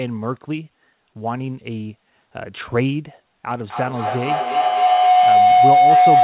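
A speech recording over a call path whose content stops at 4 kHz, consistent with a narrowband G.711 codec at around 64 kbps. From 3.58 s to the end a feedback howl builds. Two devices in the same room form a loop from microphone to loudspeaker, and each trip adds gain, so the repeats grow rather than decay. They settle on a tone near 700 Hz, come back roughly every 300 ms, and peak about 9 dB above the speech.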